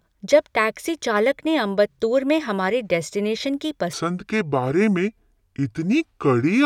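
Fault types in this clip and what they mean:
Section at the wrong speed: from 3.93 s to the end the speech turns deep and dragging, roughly seven semitones lower and running at 0.698 times its proper rate, likely because that stretch was played against a slower clock than it was recorded with.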